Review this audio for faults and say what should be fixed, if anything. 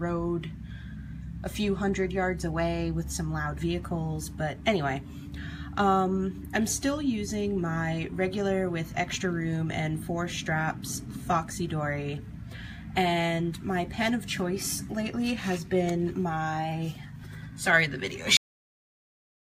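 Cut-off end at 18.37 s: the sound stops mid-event and falls straight to digital silence with no decay, because the final buffers were never written out. Flush and close the output stream fully before ending the recording.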